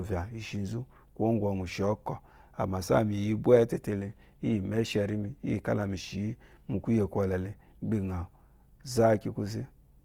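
Right through the speech there's plainly audible grit and roughness, with a grainy, noisy edge where cleaner tone should be, and the highs reach to about 20.2 kHz. That points to Opus compression, likely music-mode coding starved near 24 kbps, filling bands with noise.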